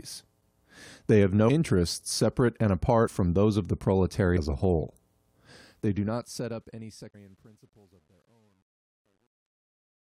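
At 1.48 s, 3.06 s and 4.36 s, compressed frames are skipped. The decoder never plays several whole frames of about 21.3 ms each. The speech jumps ahead by roughly 150, 100 and 200 ms.

From 5.55 s the fade-out shows truncation distortion on a fade. The level stage keeps only 10 bits and adds no dither. As the level drops, the waveform breaks into coarse steps. From 6.93 s to the end it turns gritty. At 7.13 s, inside this fade, another skip jumps ahead by about 200 ms.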